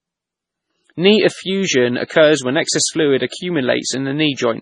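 Speech runs with heavy MP3 compression throughout: nothing sounds above 10.5 kHz, and weak detail swirls and chirps metallically on s sounds as it flickers between frames, which fits a likely starved bitrate near 24 kbps. A plain low-pass filter would dull the treble without that watery swirl.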